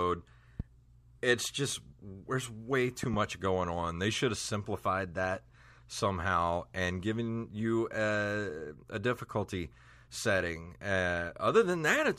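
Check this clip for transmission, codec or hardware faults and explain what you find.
Two loud pop events interrupt the speech. At 0.60 to 0.62 s, just before "it's just there's way", a single pop spikes roughly 10 dB above the speech. At 3.03 to 3.16 s, between "it's just there's way" and "going on", a double pop follows. Each is likely a voltage step or glitch, seen as a tall waveform spike and a full-height vertical stripe on a spectrogram, while the speech continues underneath.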